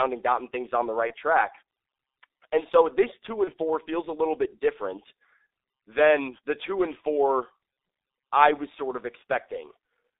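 From start to finish the speech sounds muffled and hoarse, with consonants smeared together and no air above roughly 3.7 kHz, and nothing much below 300 Hz either. This is the G.723.1 codec at work: heavy damage that fits its 6.3 kbit/s mode, a narrow telephone-line band, and a vocal-tract model refreshed only every 30 ms, so fast changes in articulation blur into a rough, grainy texture.

At 1.07 to 1.14 s and again at 3.44 to 3.52 s the speech briefly turns into a buzzy tone or coloured noise that fades, then takes a moment to regain its strength. This is VoIP packet loss concealed by the speech codec. Each gap fits a single 30 ms lost frame, during which the decoder repeated its last pitch and filter at falling gain, and the following frames, built on that guess, stayed weak until the model caught up.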